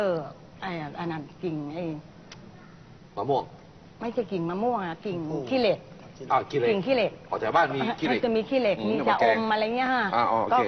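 No technical faults are audible anywhere in the audio.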